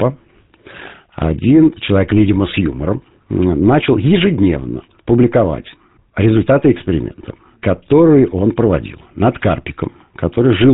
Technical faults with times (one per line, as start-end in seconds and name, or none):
0.00-10.73 GSM full-rate codec